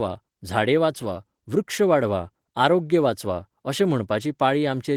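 No technical faults can be heard in the speech, which passes through Opus voice compression in its hybrid mode at 20 kbps, with only light coding traces and content reaching up to about 20.2 kHz.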